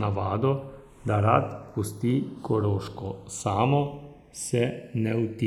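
Throughout, the two channels come from devices on separate clocks roughly 70 ppm apart. Their offset slides to under half a millisecond, so the speech drifts apart and flanges slowly in mono.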